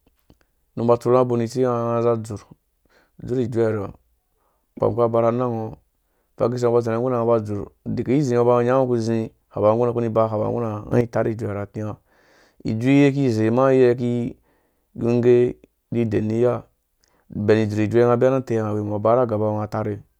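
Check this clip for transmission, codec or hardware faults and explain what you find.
There's one fault here, a sudden gain jump in the speech at about 10.92 s, settling by 11.01 s. The level steps up by about 9 dB from one sample to the next, and the background noise rises right along with the voice, so it's the whole signal getting louder. The likely cause is a digital gain setting or bit shift applied without any ramp to smooth the change.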